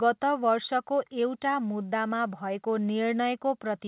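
No technical faults are audible.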